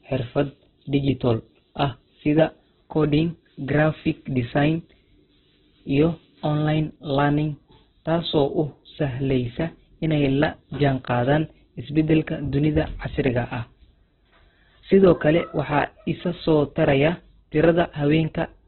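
From start to finish the speech sounds rough, grainy and boxy, with a hissy, noise-filled texture where clear tone should be and nothing above 4.1 kHz, so sibilants and breath lack any top. This is likely Opus compression in its CELT music mode, starved of bits and falling back to narrowband, consistent with a rate near 8 kbps. With so few bits, band energies survive but their detail is filled with folded or synthetic noise.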